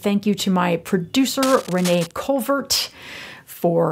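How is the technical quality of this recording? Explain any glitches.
The recording has one glitch. From 1.43 to 2.12 s, scratchy rustling sits around 10 dB under the speech: cable scratch noise, likely a moved worn connector whose contact resistance jumps rapidly.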